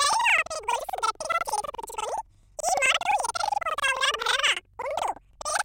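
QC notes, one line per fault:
throughout: planar audio read as interleaved; 85 ms blocks, fitting 4096 samples, play twice at double speed, putting speech an octave high with 11.7 Hz flutter.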